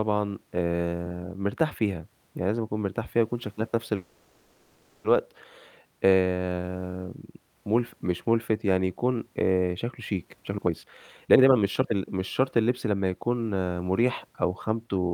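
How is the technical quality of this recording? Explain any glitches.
The recording has two network-related glitches.

From 3.95 to 5.06 s there is a call audio freeze: the last sound is stretched into a fading buzz or hiss for about 1.09 s, likely because delayed packets drained the jitter buffer. Playback then resumes where it stopped, with nothing lost. A spectrogram shows smeared, repeating horizontal bands decaying in level.

From 10.25 to 13.70 s a jitter buffer speed-up plays the speech at about 132% speed with unchanged pitch, trimming roughly a second by cutting out short pitch-period pieces. It sounds hurried. On a waveform, syllables are packed closer together, with shortened gaps.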